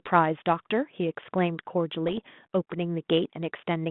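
From 2.07 to 2.19 s, bit errors on the ADPCM link break up the speech, which is carried over G.726 at 32 kbit/s in a band of roughly 150 Hz to 3.5 kHz. A few bits in a thousand are flipped, and each one knocks the decoder's step size and predictor off track, so the damage rings on briefly as pops and rough, gritty bursts with jumpy level. The waveform shows spiky, uneven amplitude across that stretch, and a spectrogram shows vertical broadband streaks inside the band, which points to about half a dozen damaged frames.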